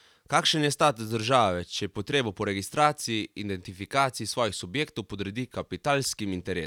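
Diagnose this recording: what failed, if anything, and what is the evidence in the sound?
Nothing in the chain from capture to playback shows a failure; the speech signal stays continuous and intact throughout.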